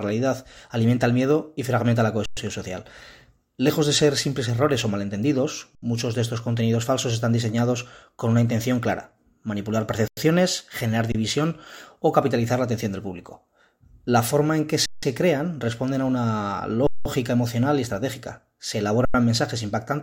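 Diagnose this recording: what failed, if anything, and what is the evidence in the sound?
Driver or buffer stage: underrun with held sample at 2.26, 5.75, 10.08, 11.12, 14.86, 16.87 and 19.05 s, lasting 26 to 186 ms. The waveform shows flat plateaus and the spectrogram shows blank vertical gaps. Playback resumes where it stopped, and the 93 ms gaps fit a 4096-sample buffer.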